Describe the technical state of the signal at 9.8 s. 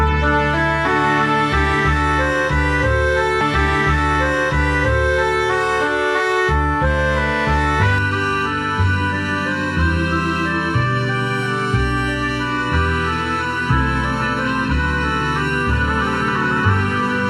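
At 9.8 s you're inside channel delay comb filtering, running from 7.98 s to the end: one side lags under a millisecond, so the mono sum loses notches from around 700 Hz upward, sounding hollow.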